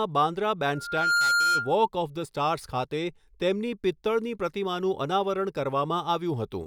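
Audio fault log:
0.73–1.76 s loudspeaker feedback squeal: the microphone picks up the loudspeaker and the loop re-amplifies 1.4 kHz, so a tone swells over roughly 0.4 s to about 5 dB above the speech.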